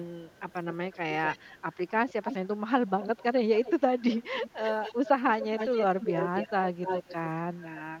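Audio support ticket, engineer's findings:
Echo leak on speech at 0.05–2.48, 2.87–5.09, 5.4–6.51 and 6.82–7.8 s. Delayed copy trails by 245 to 270 ms. It is quiet early and louder in the last two. Likely the far-end loudspeaker echo canceller is passing residual.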